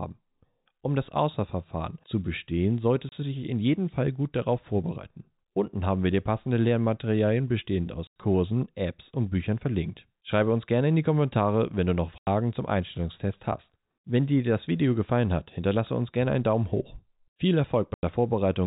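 Packet loss filled with silence cuts the speech at 3.09 s, a 30 ms gap between "zu bestehen" and "du dich in jedem", then for 90 ms each at 8.07 s, 12.18 s after "wenn du noch", and 17.94 s. Those lengths fit 30 ms packets dropped and replaced by silence, leaving hard-edged holes.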